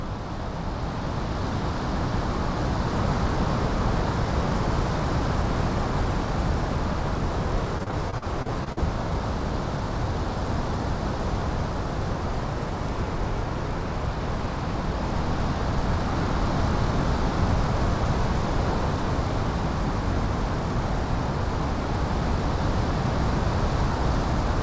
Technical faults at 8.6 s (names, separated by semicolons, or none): repeated packet loss (robotic sound)